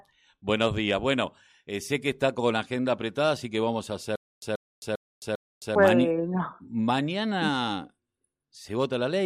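From 4.16 to 5.75 s the speech breaks into a stutter with silent gaps: the same 134 ms fragment plays four times, each followed by 265 ms of digital silence, repeating every 399 ms. The likely cause is a stalled stream replaying its last buffer on each retry. Unlike ordinary dropouts, the repeated identical burst and its even rhythm give it away.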